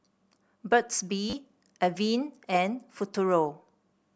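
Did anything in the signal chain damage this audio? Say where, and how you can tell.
Yes, at the driver or buffer stage: a repeated buffer from 1.3 to 1.33 s. The same 10 ms slice of speech plays three extra times, each with a hard join, so the speech briefly turns into a buzz at a 100 Hz repeat rate, which fits a 10 ms buffer. About 30 ms of new audio never arrives. A dropout would leave a silent gap, and codec loss concealment would blend smoothly rather than repeat identical segments.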